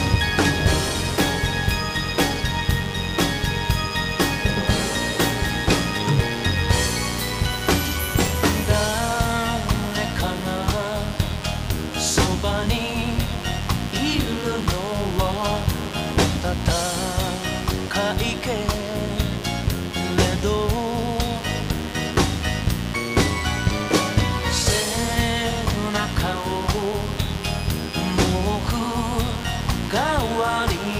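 A mains buzz runs through the whole clip, about 15 dB below the signal. Sharp switching spikes from the 50 Hz mains leaked in, twice in every cycle, giving a steady, raspy buzz.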